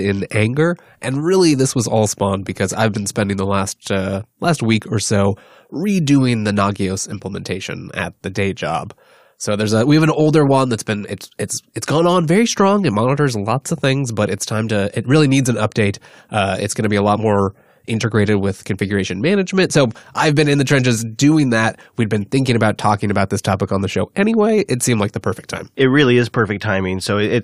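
A speech recording with no technical problem to report. Nothing at any point in it calls for a time or a cause.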